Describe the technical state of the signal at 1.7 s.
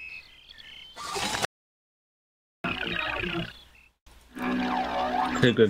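At 1.7 s the signal is dead silent: the sound cuts off abruptly at 1.45 s and nothing returns until 2.64 s, a gap of about 1.19 s with no room tone or background at all. This is an audio dropout to silence. The input was likely lost for that stretch, through a disconnected device, a failed link or an accidental mute, while recording carried on writing silence, so whatever occurred during the gap is gone.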